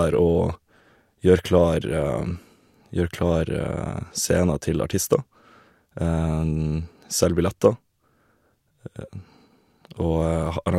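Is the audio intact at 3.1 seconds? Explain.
Yes, at 3.1 seconds the speech runs intact, with no dropout, click or other fault at that moment.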